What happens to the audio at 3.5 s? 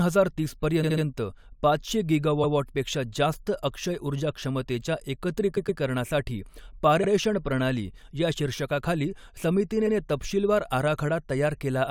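Nothing goes wrong at 3.5 s: the audio is intact at that moment, with no dropout, click, distortion or other fault.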